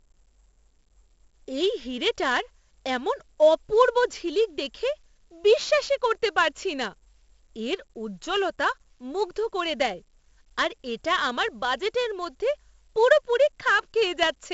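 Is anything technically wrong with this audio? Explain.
Yes. Throughout the speech, 4-bit ADPCM compression codes each sample as a coarse step from a prediction, and the step size lags sharp attacks. The result is gritty hiss riding on louder syllables, with distortion on sharp onsets. Nothing is heard above 7.7 kHz, and the dulling fits roughly 64 kbps.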